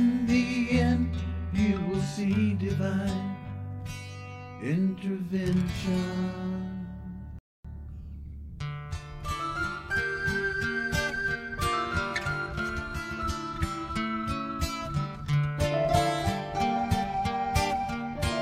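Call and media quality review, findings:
Rebuffering stall at 7.39–7.65 s: playback drops to silence for about 0.26 s, then resumes exactly where it stopped. Player buffer ran dry awaiting data; no content lost, time added.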